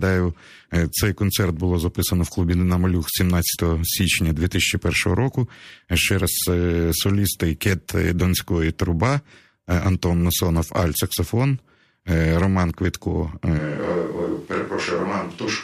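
At 13.6 s the speech abruptly turns hollow and roomy, thinner in the bass and about 5 dB quieter, with background noise roughly 30 dB down, through to the end. The added room sound, not just lower level, points to a likely switch to a distant microphone.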